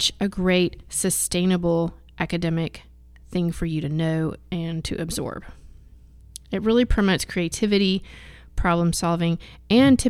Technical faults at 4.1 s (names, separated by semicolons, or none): mains hum